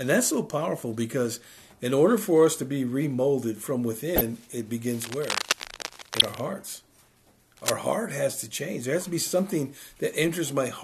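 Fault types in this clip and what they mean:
Corrupt frame decoded: at 4.16–4.21 s and 6.20–6.22 s, damaged compressed data is decoded anyway. Misread codes put energy at wrong frequencies for a couple of frames, producing loud blips peaking around -5 dBFS that sound foreign to the surrounding audio.
Cable scratch noise: from 5.01 to 6.47 s and again at 7.57–7.74 s, dense, uneven scratching and rustling sits only slightly below the sound itself. The likely cause is a worn cable or connector being moved, its contact resistance fluctuating rapidly.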